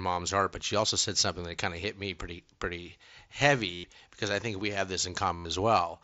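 At 3.74 s and 5.36 s, concealed Bluetooth headset packet loss fills gaps of about 0.1 and 0.09 s by looping the last waveform stretch. That gives a buzzy tone held at level that warbles as audio returns, where a plain dropout would go silent.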